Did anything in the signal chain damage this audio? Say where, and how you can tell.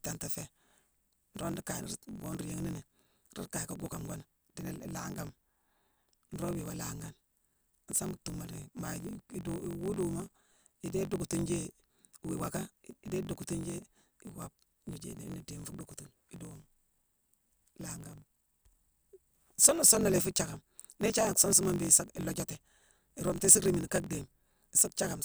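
Yes. The damage is at the driver or buffer stage, and it runs through the whole speech clip. A steady buzz near 46.9 Hz sits under the sound from start to finish. The speech also runs about 1.12 times too fast, yet its pitch stays roughly normal. That pairing points to a block size mismatch (truncated). One stage writes longer blocks than the next reads, so each block's tail is discarded. The buzz rate fits a 1024-sample read block.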